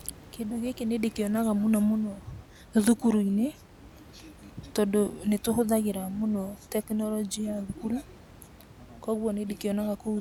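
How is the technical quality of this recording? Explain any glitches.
The recording's technical quality shows no glitches to explain, only a low room noise about 23 dB below the speech.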